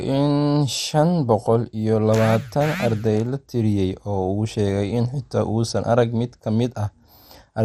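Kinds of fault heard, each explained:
MP2 compression: dull, gurgling, granular speech with nothing above 14.8 kHz, likely MPEG Layer II sub-bands starved of bits, fitting roughly 64 kbps.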